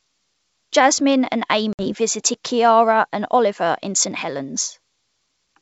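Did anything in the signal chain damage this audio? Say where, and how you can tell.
Yes, there's packet loss on an ADPCM call, so the damage comes from the network. Around 1.73 s there's a hard-edged hole of about 60 ms, a handful of packets gone and filled with silence. Because ADPCM only sends differences, the receiver's predictor and step size lose track of the sender's. The speech comes back wrong-footed and slightly distorted until things resettle by about 1.93 s. The G.722 wideband coding itself sounds clean.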